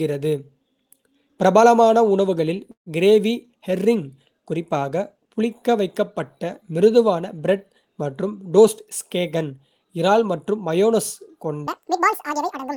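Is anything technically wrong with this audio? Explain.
Yes, the speech has three technical faults.

Call audio freeze, 2.71 to 2.88 s, between "பிரபலமான உணவுகளில்" and "கிரேவி ஹெர்ரிங்": a 149 ms gap is inserted, with the last sound briefly extended and then about 110 ms of silence before the speech resumes where it stopped. Nothing is lost. Likely cause: delayed packets emptied the jitter buffer.

Jitter buffer speed-up, 8.57 to 10.92 s, starting after "பிரெட் மற்றும்": the receiver trimmed short pitch-period-length pieces repeatedly to shrink excess buffered delay, removing about 150 ms in total. The speech runs about 6% faster at unchanged pitch and sounds hurried.

Section at the wrong speed, 11.67 s to the end: playback runs 1.87 times too fast, so speed and pitch rise together by close to ten semitones. The speech turns high and rushed. The likely cause is that this section was played or resampled against the wrong clock rate.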